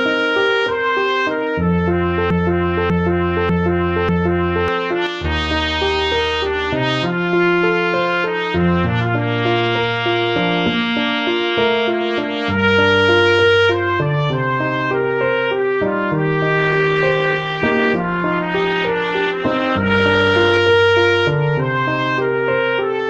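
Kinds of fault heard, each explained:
Broken-record loop: From 2.30 to 4.68 s a fragment about 0.59 s long plays four times back to back, identical each pass, and the audio that belonged in that stretch never arrives. The likely cause is a player or stream that stalled and kept resending its last buffered piece. Unlike a stutter or dropout, nothing is silenced or chopped short. The same slice returns with exact timing, like a needle stuck in a groove.
One channel drops out: Between 5.07 and 5.25 s the sound abruptly falls by about 6 dB for under a fifth of a second, then snaps back. That drop is what a mono sum gives when one stereo channel goes missing, so a lost channel is the likely cause. Apart from that abrupt 6 dB step the sound is unchanged for that instant.
Adaptive stream at a lower bitrate: From 16.58 to 20.58 s codec artefacts rise, and then full quality returns at once. The sound fits a stream switching from about 64 kbit/s Opus to a rendition near 16 kbit/s after the connection slowed. 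No gap or repetition marks the switch, which separates it from a buffer stall. Only the fidelity changes, suddenly and for a bounded stretch.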